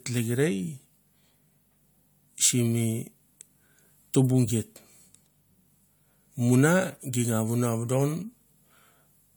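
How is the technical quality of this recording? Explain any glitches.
Nothing stood out as a glitch or technical problem on listening to the recording.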